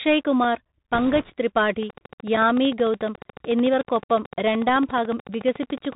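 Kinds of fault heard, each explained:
Bluetooth CVSD headset codec: Throughout, the speech has the narrowband sound of CVSD, a one-bit delta modulator whose adaptive step tracks the waveform. Nothing above 4 kHz survives, sibilants turn scratchy, loud bright sounds overshoot the step and distort, and a granular hiss sits underneath.
Block of digital silence: Two short runs of samples drop to silence with no fade, one at 0.44 s lasting 2.67 ms and one at 2.37 s lasting 5.33 ms. Each is heard as a tick or dip. The lengths fit 128- and 256-sample output buffers that were not filled in time.
Bit errors on a Bluetooth voice link: From 0.94 to 1.32 s, flipped bits in the CVSD stream, at a rate of around 2 percent, add a rushing crackle to the speech. Each bit carries little weight and errors decay quickly, so it sounds like noise rather than loud clicks.
Train of clicks: From 1.83 s to the end, about fifty similar clicks arrive at a regular 13.7 per second, peaking about 10 dB above the speech and ticking through pauses as well. 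The steady repetition points to likely interference from nearby equipment or a faulty connection or power supply.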